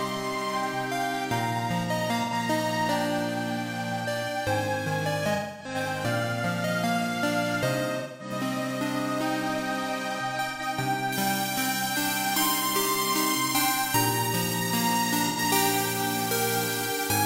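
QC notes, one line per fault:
2.23 s, 10.50 s, 15.28 s: AAC frame loss with concealment. Roughly 85 ms gaps, consistent with two lost frames, filled from the last good spectrum and heard as brief smeared, noisy patches.
5.34–5.75 s and 7.99–8.31 s: AAC frame loss with concealment. Longer losses of about 256 ms and 213 ms. The decoder extends the previous spectrum, so the sound turns phasey and dips before recovering.
11.13–17.25 s: pre-emphasis left on. The treble boost follows a 75 µs FM curve with no matching de-emphasis, leaving highs about 14 dB hot at 10 kHz relative to 1 kHz, so the sound is thin, bright and sibilant.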